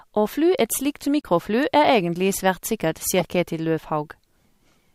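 In this speech clip, damaged compressed frames reached the decoder and were played without being concealed: corrupt frame decoded, twice. Flipped bits scrambled gains and codes across a few consecutive frames, placing energy at wrong frequencies. Each event sounds like a short chirpy burst of noise, peaking around -15 dBFS: one at 1.21 to 1.25 s, and a longer one at 3.19 to 3.26 s.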